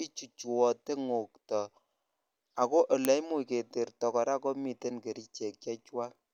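Uninitialised buffer at 3.05 s: a block lasting 0.73 ms, which fits a 32-sample buffer, was sent to output before any audio had been written into it. Leftover memory contents were played as samples, producing a loud crack cutting through the speech.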